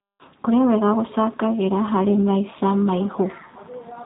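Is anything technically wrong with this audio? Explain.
Yes. G.729 codec damage runs throughout the speech: the encoder rebuilds each 10 ms frame from a vocal tract filter, a pitch predictor and a few pulses, discarding everything above 4 kHz. The result is plainly audible dullness, roughness and a synthetic edge, consistent with an 8 kbit/s G.729A stream.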